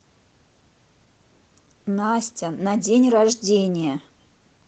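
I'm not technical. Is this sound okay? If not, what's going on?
Yes, the speech comes through with no technical faults, and the Opus voice compression it passed through is working as it should, with only a light effect on the sound.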